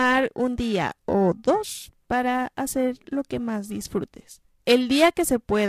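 Speech runs the whole way with periodic clock jitter. The converter's clock is being shaken at about 1 kHz. Each component of the sound gains sidebands spaced that far above and below it, strongest on high frequencies. The result is a rough, metallic edge that disappears in the pauses.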